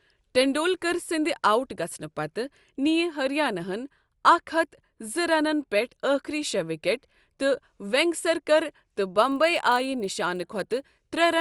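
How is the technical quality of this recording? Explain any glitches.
The speech has one glitch. From 9.16 s to the end, a resampler restarted on every block adds a 25 Hz tick. Each 40 ms block loses its neighbours at the edges, which fits upsampling from 24 kHz to 48 kHz.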